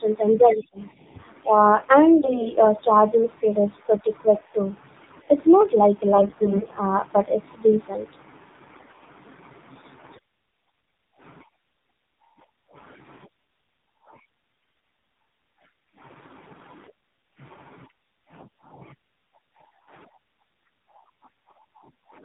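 Speech coded with the AMR narrowband mobile codec: nothing above 4 kHz survives, and the voice is buzzy and synthetic, which fits a low mode around 7.4 kbps rather than a simple low-pass filter. AMR bit errors turn the voice hoarse, scratchy and gargly at 2.20–2.52 s, 6.12–6.77 s, 8.68–8.91 s, 10.68 s, 14.60–14.82 s and 18.40–18.62 s. Unlike dropped frames, there are no gaps and pitch and level hold, because only the weakly protected bits were corrupted.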